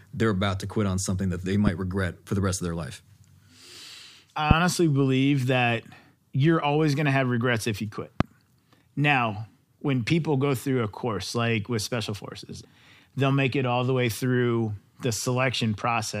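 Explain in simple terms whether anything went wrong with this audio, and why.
Three loud pops jump out of the speech: at 1.67 to 1.70 s, 4.51 to 4.53 s and 8.20 to 8.23 s. Each is a single sharp click, a few hundredths of a second long, standing well above the talking, which carries on underneath. The first is a bit softer, and the later two are noticeably harder. The likely cause is a quick electrical jolt, such as a cable shifting, a switch or a static spark, briefly kicking the signal.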